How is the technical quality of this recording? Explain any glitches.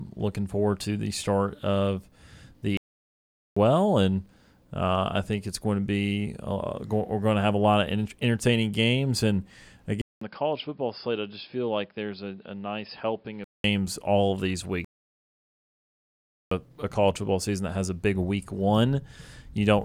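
The recording has three glitches: two playback stalls and one stretch where the input switched to a poorer device.

Playback stalls at 2.77 to 3.57 s and 14.85 to 16.51 s. The speech cuts to silence for 0.79 s, then 1.67 s, likely because the player ran out of data. It resumes with "and uh I think", and later after "all of these" with "a college football season".

Input switched to a poorer device at 10.01 s, after a 200 ms gap. Until 13.64 s the sound turns dull. It drops about 10 dB and gains a noise floor about 40 dB down. This is likely a fallback microphone or headset profile. Full quality returns before "all of these".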